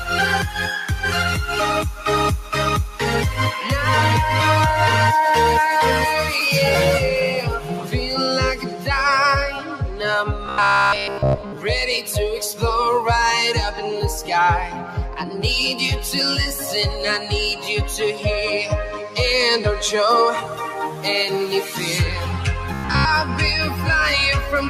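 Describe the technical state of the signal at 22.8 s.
At 22.8 s you're inside a short stretch of robotic sound from repeated short buffers, running from about 22.74 to 23.07 s. It's a stiff, metallic buzz pinned at roughly 67 Hz, and it only loosely tracks what's underneath. The likely cause is audio arriving too slowly, so the software loops the last chunk, about 15 ms, and drops the real signal. Most of that third of a second is repeats.

On top of that, there's a noise suppressor applied to music or sounds for the whole clip, so it's running here too. It's treating sustained parts and tails as noise and pulling them down, while attacks get through. Level swings by around 5 dB, which gives a pumping, thinned-out feel.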